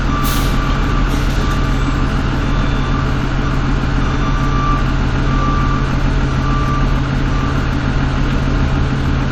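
Nothing in this recording of sounds stood out as a technical problem on listening.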